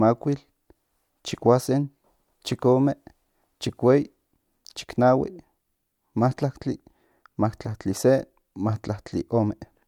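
Speech recording, no technical faults detected anywhere in the clip.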